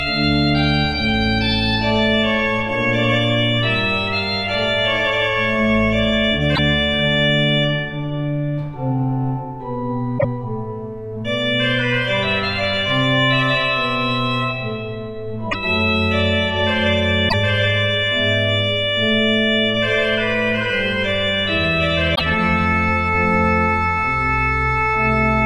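Damaged data in a compressed stream breaks through at 6.52–6.59, 10.15–10.25, 15.48–15.55, 17.26–17.34 and 22.14–22.21 s. Each time, corrupted bytes make the decoder misread frames and lose sync, producing a brief glitch.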